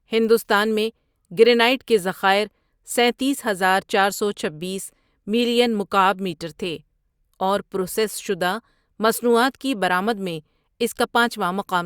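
No technical faults can be heard anywhere in the recording, and the signal stays intact and continuous for its whole duration.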